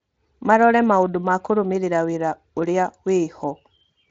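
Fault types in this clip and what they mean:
No fault can be heard in this speech clip, whose signal stays steady throughout, with only light coding texture typical of a low-bitrate voice path.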